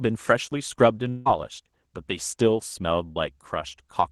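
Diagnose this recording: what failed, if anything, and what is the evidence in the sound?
Network stage, long network dropout: from 1.09 to 1.28 s the speech is replaced by about 0.16 s of synthesized continuation of the last sound, with no true silence. The likely cause is a gap in arriving audio. On a spectrogram the harmonics smear and fade before normal detail resumes, with the lost passage absent.

Network stage, short concealed packet loss: at 3.12 to 3.18 s there is a brief smear where about 40 ms never reached the decoder in time and the receiver extrapolated from the preceding sound. The spectrogram shows a short blurred patch before the real audio blends back in.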